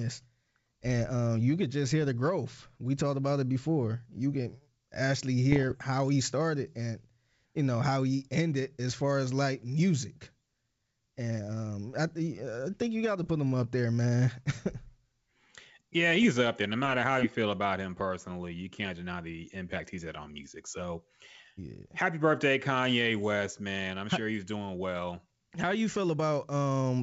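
Bit errors on an ADPCM link hit the speech four times: at 2.02 to 2.09 s after "um you could just", at 5.52 to 5.79 s before "how he started and", at 13.20 to 13.28 s between "I think you got" and "put him up there", and at 16.16 to 16.23 s. Each corrupted code word throws off the decoder's step size and predictor, so the damage rings on briefly as pops and rough bursts with momentary level jumps, all over an otherwise clean 64 kbit/s G.722 wideband path.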